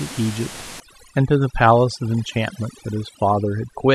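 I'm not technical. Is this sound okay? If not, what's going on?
No. From about 0.8 seconds to the end, the gaps between phrases drop to an unnatural near-silence with twinkling specks. This is overdone noise removal: a cleanup tool set far too strong. It shuts off parts of the sound it mistakes for background noise, taking the quieter parts of the voice with them. The ordinary room noise underneath was never a problem in the first place.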